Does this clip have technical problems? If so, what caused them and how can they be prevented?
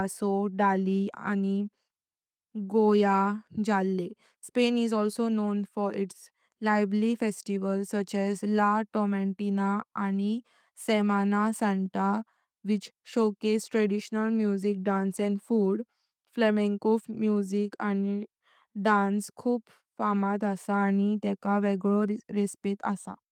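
No, nothing technical goes wrong anywhere in this speech recording, so there's nothing here that needs fixing or preventing.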